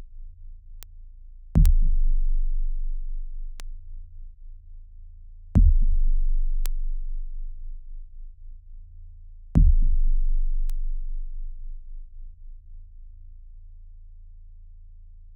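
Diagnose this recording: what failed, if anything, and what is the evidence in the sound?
Bit error spikes, from storage or a digital link. Isolated sharp ticks occur at 0.83, 1.66, 3.60, 6.66 and 10.70 s, peaking between about -17 and -5 dBFS. Each is a sample or three, unrelated to the sound. A flipped bit jumps the value by a power of two, then it returns.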